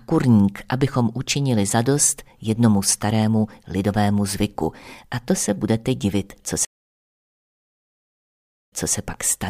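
At 6.65 s the audio drops out completely for about 2.04 s, which is a classic stream reconnect. The connection broke, the player sat silent while it re-established the link, then spun up a fresh decoder partway through the stream. When sound returns it picks up about 0.26 s earlier than where it cut off, so you hear a short stretch repeated. The first frame or so comes in muted or faded in, and the whole event wraps up by 8.95 s.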